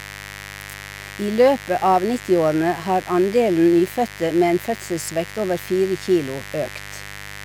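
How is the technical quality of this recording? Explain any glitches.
The recording is marred by a mains buzz that runs under the speech from start to finish. It is a steady, raspy drone, roughly 20 dB below the level of the speech. Its fundamental sits at 50 Hz, but sharp switching spikes, arriving twice per mains cycle from something like a dimmer, rectifier or poorly shielded cable, add harmonics reaching up into the kilohertz range, giving the buzz its edge.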